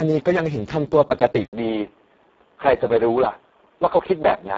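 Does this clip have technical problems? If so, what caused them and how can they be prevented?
Yes. Throughout, Speex codec damage is heavy: speech sounds hoarse and noisy because a bitrate near 5.8 kbps leaves the CELP excitation starved. A spectrogram shows smeared, noise-like texture above 4 kHz and nothing above 7.7 kHz. Encoding at a higher Speex quality setting prevents it.

From 1.45 s to the end, after an 80 ms silence, the sound turns dull. The input was likely switched to a poorer device. A spectrogram shows energy stopping at 3.8 kHz and a faint new noise floor, with the waveform level unchanged. Locking the input device prevents it.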